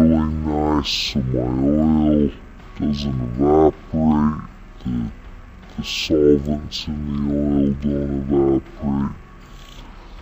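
From start to finish, a stereo read as mono fault: interleaved left and right samples are taken one after another as a single channel. Everything plays at half speed, a full octave (12 semitones) low, with a faint mirrored copy in the upper spectrum.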